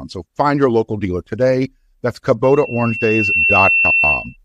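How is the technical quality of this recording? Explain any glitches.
Not great: the speech gets swamped partway through by loudspeaker feedback squeal. From 2.44 to 4.37 s the mic keeps re-amplifying its own speaker at 2.7 kHz, swelling over about a second into a whistle about 5 dB louder than the speech.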